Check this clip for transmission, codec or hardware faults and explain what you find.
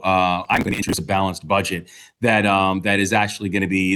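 One fault, processor overload crackle, from 0.45 to 0.98 s: dozens of missed buffers, around 10 ms each, skipped outright, causing gritty tearing, seen as waveform gaps and vertical spectrogram streaks.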